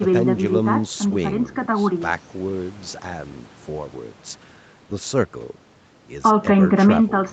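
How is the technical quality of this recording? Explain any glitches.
No glitches to explain; nothing here sounds faulty.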